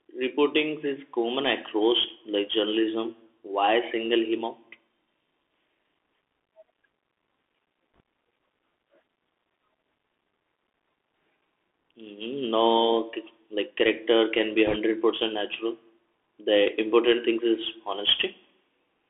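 Bluetooth CVSD headset codec runs throughout the speech, which fits a 64 kbps one-bit delta stream. Each sample only steps up or down with an adapting step size, so sound sits between about 250 Hz and 3.5 kHz, sharp loud sounds outrun the step and distort, s sounds turn scratchy, and a granular hiss lies underneath.

Bit errors on a Bluetooth voice link appear from 7.96 to 8.00 s, at an error rate of roughly one or two percent, and again more heavily from 14.67 to 14.76 s. Each flipped bit carries little weight and the error fades quickly, so there are no loud clicks, just a short burst of rushing crackle over the speech.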